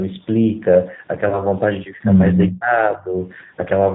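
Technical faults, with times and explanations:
Throughout: G.729 codec. The speech is clear but rough and slightly synthetic, with plainly audible coding damage. This fits an 8 kbit/s codec that rebuilds each 10 ms frame from a vocal tract filter, a pitch predictor and a few pulses. On a spectrogram, energy stops sharply at 4 kHz. The harmonics look smeared and the noise floor between them looks grainy.
1.29 to 1.42 s: VoIP packet loss concealed by the speech codec. About 30 ms of audio went missing, consistent with one lost packet. The decoder filled the gap by repeating its last pitch and filter at falling gain, which gives a short stretched sound that fades. Because each frame depends on the one before, the sound stays weak after the gap. On a spectrogram this shows as flat, repeated bands, and the waveform shows a decaying envelope.
2.51 to 3.14 s: speech suppressed in double talk. 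Over roughly half a second within this span, the level dips by up to about 15 dB. This is likely an echo canceller that could not separate the near talker from loudspeaker echo while both sides spoke, so it attenuated everything. In the waveform the envelope sags unevenly, and on a spectrogram the bands fade during the dip.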